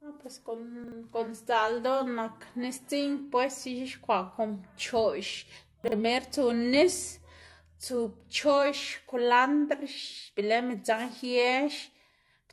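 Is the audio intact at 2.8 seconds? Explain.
No. At 2.8 seconds, as throughout, the speech sounds dull above 12.1 kHz with layered artefacts from the different codecs, likely from transcoding between lossy codecs, which fits an MP3 then AAC chain.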